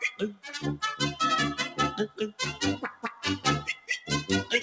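Throughout, a noise suppressor applied to the sound swings its level by about 10 dB. Sustained parts and tails sink while attacks pass, giving a pumping, thinning effect. Unlike a compressor, it reacts to how steady the sound is rather than how loud it is. The sound is cut by the noise suppressor from 0.12 to 0.48 s (dropping by about 16 dB), from 2.84 to 3.24 s (about 15 dB) and from 3.7 to 4.09 s (about 13 dB). Each time the held portion dips sharply while its onset survives, so these are not dropouts. The band stops at 8 kHz, which fits a G.722 call path.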